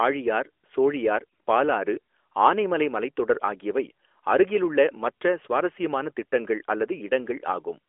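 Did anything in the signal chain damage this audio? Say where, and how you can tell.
No, nothing in the chain damaged this speech. It passes through an AMR narrowband mobile codec, which holds it to a telephone band of about 300 Hz to 3.4 kHz with only a light coding texture, in keeping with the 12.2 kbps AMR-NB mode.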